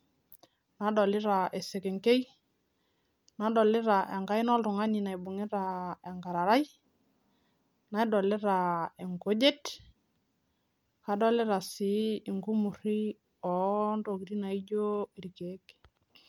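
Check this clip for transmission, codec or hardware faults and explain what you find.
No fault turns up anywhere in the speech, and the signal stays continuous and intact throughout.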